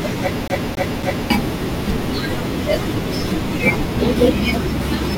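From 0.48 to 1.30 s the speech sticks like a CD stuck on one turn: a 0.28 s slice repeats three times, showing as identical waveform blocks separated by brief silent gaps.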